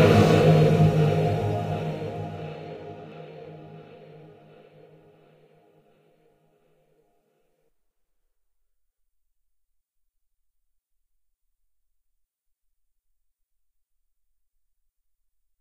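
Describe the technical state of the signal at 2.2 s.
Dropped samples at 2.16 s: a single sharp click, likely from a handful of samples, roughly a tenth of a millisecond, going missing from the stream. The waveform jumps straight to a later value, leaving a thin vertical line across the spectrum without removing any audible sound.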